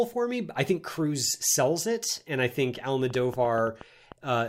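A speech clip in which, right after "it and I think", a train of clicks ticks over the sound from 3.10 to 4.13 s: around seven similar pops at an uneven pace of about 6.9 per second, peaking roughly 5 dB above the speech. Likely cause: electrical interference or a faulty connection or power supply.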